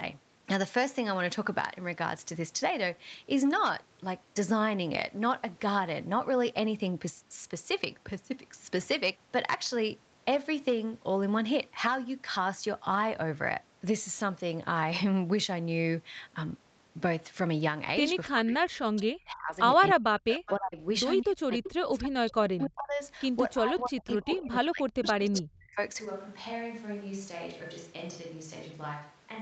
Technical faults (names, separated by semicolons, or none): speech suppressed in double talk; echo leak; switch to a distant microphone